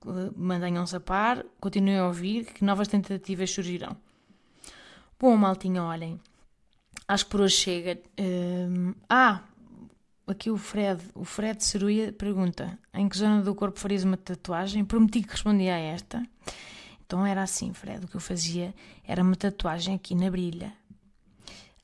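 Speech recording with no audible technical faults anywhere in the clip.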